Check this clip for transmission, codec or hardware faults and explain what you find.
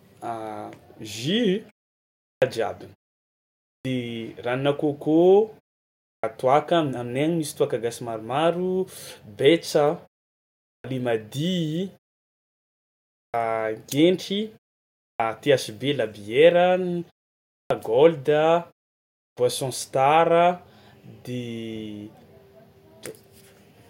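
One fault is present: clipped start after a pause, at 2.23, 3.67, 6.05, 10.67, 13.14, 15.0, 17.53 and 19.16 s. After each silence of 0.5 to 1.24 s, the output device has gone idle and needs time to wake. That swallows 170 to 210 ms of onset, so speech starts abruptly without its first sounds.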